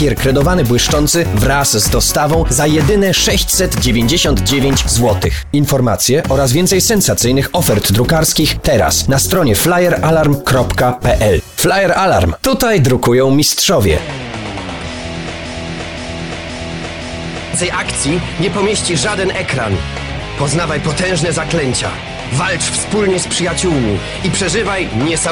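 A stall somewhere in the playback or streaming chain, most likely a player or encoder that stopped receiving fresh data and kept resending the last fragment it held, produces a broken-record loop from 15.45 s to 17.54 s. A slice of about 0.52 s repeats exactly four times back to back, so the sound stutters in identical cycles, and whatever should have played during those two seconds is gone rather than delayed. Later, at 20.18 s, a DC step occurs: the waveform's zero line jumps abruptly, as happens when a converter recalibrates or an input carrying an offset is switched in. The offset then drains away at the rate of a 5 Hz high-pass, settling within a fraction of a second. That sudden shift is heard as a single low thump or click while the sound itself carries on unchanged.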